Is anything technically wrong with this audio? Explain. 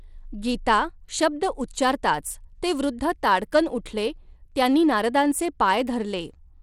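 Yes. Throughout the speech there is plainly audible damage from likely Bluetooth SBC compression, consistent with a bitrate near 96 kbps: starved upper sub-bands leave nothing above 17.2 kHz, with gritty, flickering treble.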